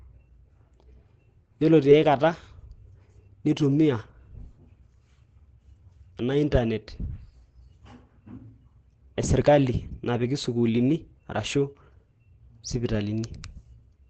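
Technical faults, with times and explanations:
Throughout, Opus compression: the speech sounds muffled and hoarse, with nothing above about 8.7 kHz, and the damage is plainly audible. The likely cause is Opus in its SILK speech mode at wideband, which fits a bitrate near 16 kbps.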